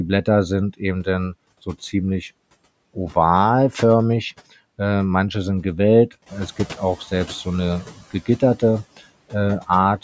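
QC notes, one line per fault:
Throughout: noise suppressor artifacts. The suppressor pulls the steady background down by about 20 dB frame by frame, so the residue sinks in pauses and swells under the speech. Unlike the later lag, this pumping stays constant rather than settling.
6.26 to 6.48 s: noise suppressor catching up. Right after "manche sind gewellt" the room noise jumps by about 12 dB, and the suppressor's estimate trails it, so the louder background leaks through with only about 9 dB of cut for roughly 220 ms before sinking again by "gibt auch selbst so". A one-off lag, not the ongoing flutter.
7.86 to 8.42 s: speech cut by the noise suppressor. Here the suppressor mistakes parts of the speech for noise and turns them down by as much as about 13 dB, around a fifth of a second in total, so soft sounds come across swallowed. The speech itself dips along with the background.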